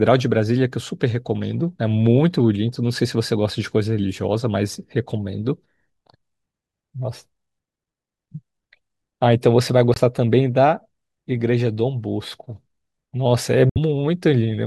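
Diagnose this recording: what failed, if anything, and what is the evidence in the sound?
Corrupt frame muted at 9.94–9.98 s and 13.70–13.78 s: damaged compressed frames were rejected by the codec, leaving abrupt 40 ms and 80 ms silences with timing intact.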